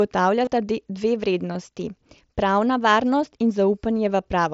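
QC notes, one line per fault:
0.45–0.47 s and 1.53–1.55 s, concealed Bluetooth headset packet loss. Each gap lasts about 22 ms, which fits roughly three lost headset frames. The receiver filled them by repeating a closely matching recent stretch of waveform. The patch sounds like a brief held buzz, then a slight warble as real audio resumes through the mSBC link.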